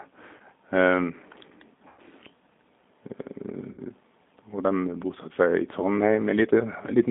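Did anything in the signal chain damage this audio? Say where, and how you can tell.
Yes. At the codec stage, G.729 coding limits everything to about 200 Hz to 3.6 kHz. The speech sounds rough and synthetic, which fits an 8 kbit/s stream.

On the network, VoIP packet loss concealed by the speech codec hits at 0.38, 1.88 and 3.72 s. Gaps of 20, 100 and 60 ms become stretched, fading extrapolated sound.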